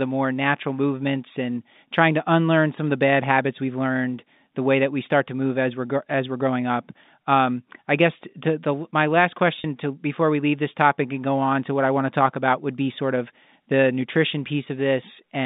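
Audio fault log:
9.60 s, packet loss with pitch repetition: after "to the my last", about 40 ms of audio drops out, roughly two packets' worth. The receiver bridges the gap by repeating the last pitch period, giving a brief held, buzzy tone before "to before we leave" resumes. The G.711 telephone band, about 150 Hz to 3.7 kHz, is audible across the clip.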